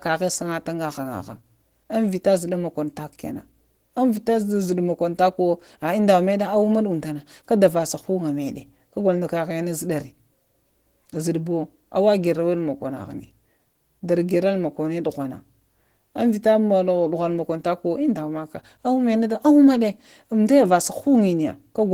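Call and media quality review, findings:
Opus voice compression throughout the speech, plainly audible. Sound fits a 16 kbps hybrid mode: SILK linear prediction codes the low band, CELT above 8 kHz, 20 ms frames. Coarse excitation coding leaves speech hoarse, slightly robotic. Band reaches about 20.2 kHz.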